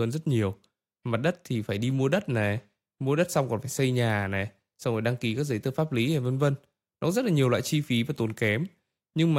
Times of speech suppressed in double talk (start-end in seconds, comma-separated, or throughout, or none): none